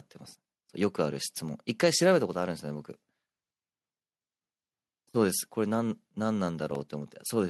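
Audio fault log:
6.71 to 6.89 s, processor overload crackle. A burst of gritty crackle hits the speech. A handful of missed deadlines leave hard-edged silent gaps, which fits buffers of about 5 ms.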